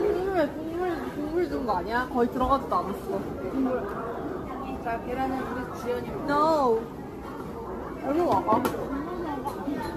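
From start to end, the sound carries generation loss. The texture swirls and smears. The tone is hollow, with gaps in the spectrum. Sharp onsets are blurred and soft. This is more damage than one lossy pass at a modest rate would cause. The likely cause is repeated lossy coding, about seven rounds of something like AAC-LC near 64 kbit/s. Each new encode quantises on a shifted frame grid, so the noise and holes pile up.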